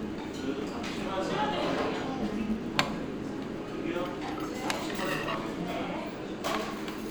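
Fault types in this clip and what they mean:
Filter restarted on every block: The filter loses its memory at each block boundary and starts from silence. Each restart leaves a transient. Here they repeat at 172 Hz throughout, a buzz that rises and falls with the sound's level. It fits a 256-sample block.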